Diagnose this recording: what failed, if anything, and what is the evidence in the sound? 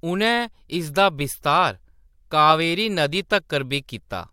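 Nothing failed; no fault is audible anywhere.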